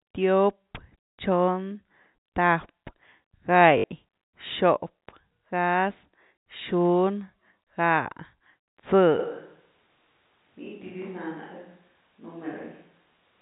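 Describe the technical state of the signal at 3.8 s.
At 3.78 to 3.84 s there is packet loss with the last packet repeated: about 60 ms of signal went missing, which fits three 20 ms packets, and the receiver filled the gap by replaying the last good packet until fresh data arrived just before "xop gáz". Because each repeat ignores the pitch period, the run buzzes at about 50 Hz, a brief robotic stutter within the 4 kHz-limited G.711 telephone band.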